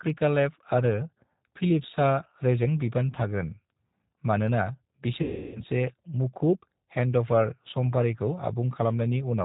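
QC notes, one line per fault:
Throughout: G.729 codec. The speech is band-limited, with nothing above 4 kHz, and has a plainly audible rough, slightly synthetic texture, as if rebuilt rather than recorded. That fits G.729A at 8 kbit/s. The coder keeps only a vocal tract filter, a pitch predictor and a handful of pulses per short frame, so fine detail and breathiness are replaced by a sparse, buzzy approximation that stays intelligible.
5.22–5.64 s: VoIP packet loss concealed by the speech codec. Here the speech is stretched into a held buzzy tone or coloured noise that weakens as it goes, and the voice sounds thin and distorted for a moment once it returns. About 330 ms of packets went missing. The decoder filled the gap by repeating its last pitch and filter settings at steadily falling gain. Because each frame builds on the previous one, recovery lags slightly behind the packets' return.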